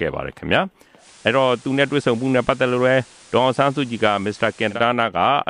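At 0.97 s the receiver loses the digital stream and does a digital radio blend to analogue FM over about 114 ms. Hiss rises to roughly 25 dB below the signal, and level dips about 1 dB until it blends back at 4.81 s.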